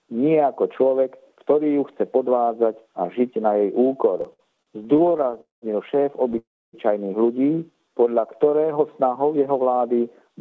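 Repeated stalls (stutter) run from 4.18 to 5.37 s. The sound halts about twenty times, with pauses of up to 57 ms adding roughly 0.28 s in total, about a quarter of that stretch. Each stall is bridged by a brief continuation of the last sound, so nothing is lost, but the audio drags and catches because packets kept arriving more slowly than playback needed, draining the jitter buffer again and again. A call audio freeze follows at 5.41 to 5.64 s and another at 6.38 to 6.75 s. In each, the sound hangs as a fading buzz and then drops to silence, for about 0.17 s and 0.28 s respectively, before resuming exactly where it stopped. These are likely packets held up in transit emptying the buffer, and each inserts a gap of 0.21 s and 0.35 s while removing nothing. A jitter buffer slow-down at 7.56 to 8.56 s stretches the audio by 148 ms, so it plays at 86% speed at unchanged pitch. The receiver repeated single pitch periods and bits of pauses to rebuild its reserve, leaving sounds drawn out. 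Throughout, nothing is present above 8 kHz, which fits a G.722 call codec at 64 kbps.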